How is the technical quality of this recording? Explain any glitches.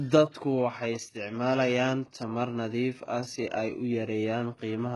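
The quality's pretty rough, mainly because of heavy compression damage running through the whole speech clip. It's likely HE-AAC compression: the encoder codes only the lower spectrum properly and fakes the treble by copying lower bands upward under a coarse envelope. Nothing survives above about 11.5 kHz, and the damage is heavy enough to point to a very low bitrate, around 12 kbps. The top end sounds wrong, with s sounds coming out gritty, metallic and a bit lispy because the rebuilt harmonics don't line up with the real ones.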